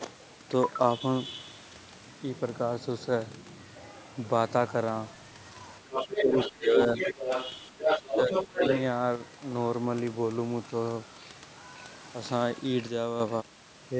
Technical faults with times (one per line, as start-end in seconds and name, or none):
5.91-6.50 other side's voice leaking through
6.06-7.20 speech suppressed in double talk
6.98-7.52 other side's voice leaking through
7.71-8.62 speech suppressed in double talk
7.79-8.81 other side's voice leaking through